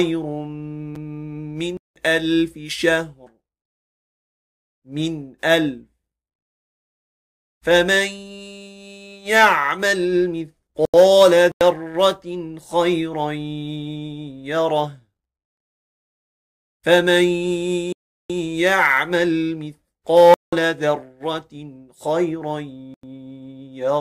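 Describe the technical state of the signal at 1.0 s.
A Bluetooth stall sits just before this point, at 0.95 s, likely from interference delaying packets until the headphones' buffer emptied. The sound drops to silence for about 7 ms, then resumes where it stopped once the resent packets arrive.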